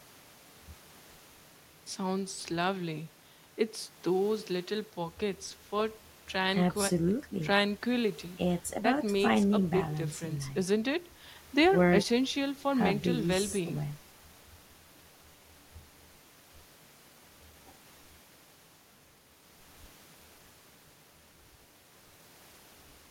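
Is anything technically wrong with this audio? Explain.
Yes. From 0.89 s to 22.62 s, faint ticks recur about once a second, clock slip clicks likely caused by unsynchronised device clocks drifting roughly 20 ppm and dropping or repeating single samples.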